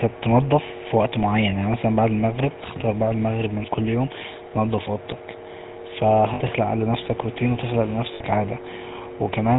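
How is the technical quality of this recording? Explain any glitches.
The speech has been squeezed through a low-rate phone codec throughout, and it breaks up twice near the end.

The whole clip carries GSM full-rate codec damage, at a level that fits the 13 kbps GSM full-rate codec. The codec rebuilds speech from a vocal-tract model driven by a sparse, regularly spaced pulse excitation, discarding most of the fine detail and everything above 4 kHz. The result is plainly audible: a muffled top end and a buzzy, gravelly roughness laid over every syllable.

Lost GSM frames occur at 6.34 to 6.41 s, just before "لنفسك روتين وتخلق", and again at 8.14 to 8.21 s, just after that same phrase. Each gap lasts 60 ms, which fits three lost 20 ms frames. The decoder covers each gap by reusing the parameters of the last good frame, so the sound briefly freezes into a short, rough, metallic ring instead of dropping cleanly to silence.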